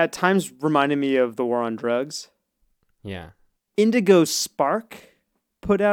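Speech, with nothing technically wrong to report.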